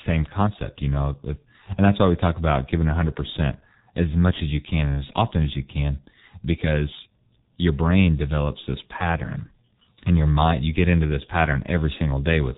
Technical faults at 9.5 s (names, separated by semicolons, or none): G.723.1 codec